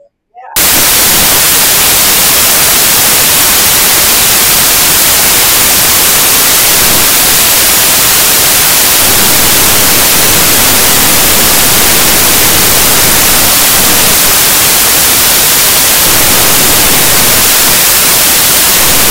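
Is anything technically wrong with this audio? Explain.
Yes. From about 0.56 s right through to the end, the samples are built from the wrong bytes: each value gets assembled misaligned or byte-swapped, so the jittery low bits dominate. The speech turns into loud, harsh broadband noise, close to white on the loud parts.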